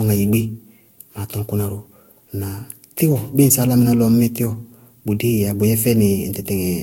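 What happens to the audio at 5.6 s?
Generation loss runs through the whole clip, including 5.6 s, likely from about five lossy re-encodes at similar bitrates, leaving swirly, hollow speech, blurred attacks, and nothing above 16.7 kHz.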